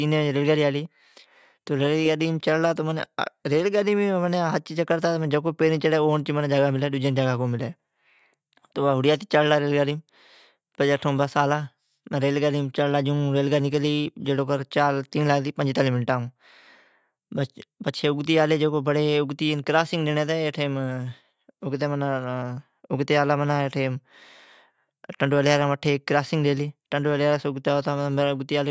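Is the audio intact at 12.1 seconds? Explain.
Yes, at 12.1 seconds the speech runs intact, with no dropout, click, distortion or other fault audible at that moment.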